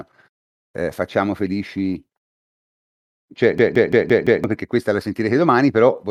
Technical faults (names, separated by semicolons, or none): system hang loop